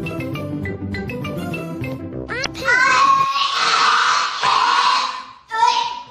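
Throughout, the audio was likely passed through MP3 compression at a rate fitting 64 kbps, which discards weak frequency detail and leaves plainly audible watery, swirling artefacts. From 2.42 to 2.46 s, damaged data in the compressed stream knocks the decoder out of sync, causing a brief glitch until it relocks.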